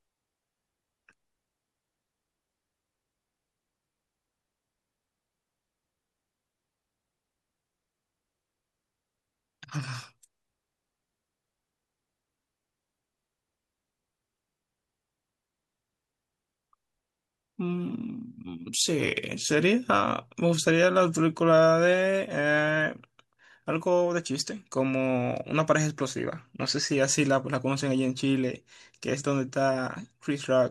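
There are no technical faults to describe in this speech recording.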